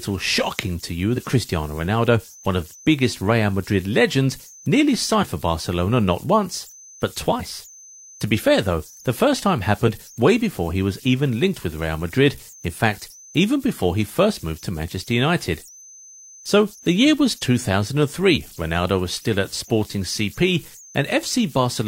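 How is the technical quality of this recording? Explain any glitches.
The technical quality isn't great; two separate problems are audible.

Throughout, there are converter idle tones: an undithered delta-sigma converter cycles on quiet input, leaving tones near 7 kHz, about 25 dB below the speech.

There's also damaged data in a compressed stream at 1.13–1.18, 5.18–5.24, 7.36–7.41, 9.84–9.89 and 18.33–18.38 s. The decoder misreads corrupt frames and resyncs, producing brief glitches.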